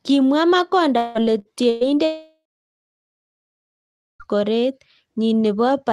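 From 0.97 to 1.18 s a concealed fading fill stands in for about 180 ms of lost speech, likely a long network dropout, showing as smeared, decaying energy on a spectrogram. Bursts of packet loss at 1.39 to 1.48 s and 1.69 to 1.84 s drop about 60 and 120 ms, each a fading fill with a blurred spectrum. From 2.05 to 4.23 s, likely another long network dropout, 2.16 s is gone: a brief fading fill, then about 1.8 s of flat, empty waveform, within an Opus call path band-limited near 12 kHz.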